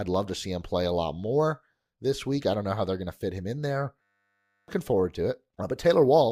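After "fit him in there", a system hang loop runs from 4.02 to 4.68 s. The system stalled while the hardware kept replaying one 10 ms buffer slice, producing a steady 100 Hz buzz. Roughly 0.7 s of audio is lost before "forward to".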